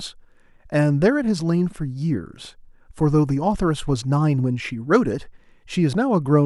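No technical fault can be heard anywhere in this speech recording.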